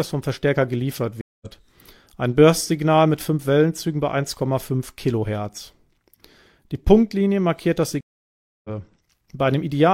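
A stream reconnect at 1.21 to 1.47 s: the connection dropped and a new decoder picked up mid-stream, leaving a 0.2 s silence before the speech resumes about 150 ms further on. A second reconnect follows "markiert das" at 8.01 to 8.70 s, with a 0.64 s gap and roughly half a second of speech skipped.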